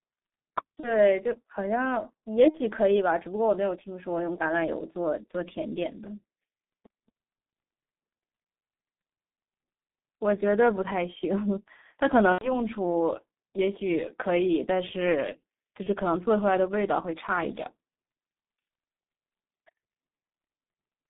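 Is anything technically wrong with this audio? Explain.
Yes. G.723.1 codec throughout: its low bitrate, about 6 kbit/s, and 150 Hz to 3.7 kHz band leave the speech muffled and hoarse, consonants smeared. VoIP packet loss concealed by the speech codec at 0.80–0.97, 2.48–2.60, 12.32–12.62 and 15.83–15.90 s: the decoder extrapolates missing frames, giving fading buzzy or noisy stretches that cover 30 to 90 ms of lost audio.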